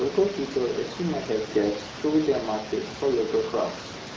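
No technical faults can be heard in the speech at any point, so there is nothing to place in time order.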